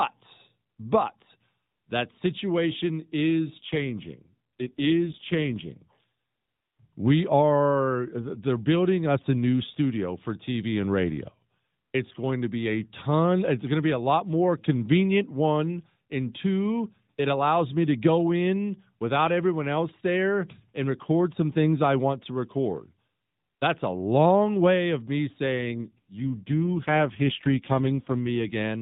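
From 3.58 to 5.82 s, and again from 25.54 to 28.56 s, the speech turns rougher, buzzier and more synthetic, with no gap and no change in bandwidth, then recovers. This is an AMR rate drop. The narrowband mobile codec, lightly coloured at its normal rate, shifts to fewer bits for the speech model, which fits a drop from 12.2 to 5.9 kbps, spending the rest on error protection over a weak radio link.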